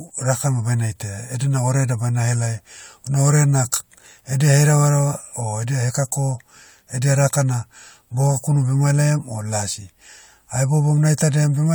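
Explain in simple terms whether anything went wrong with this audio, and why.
Nothing went wrong here.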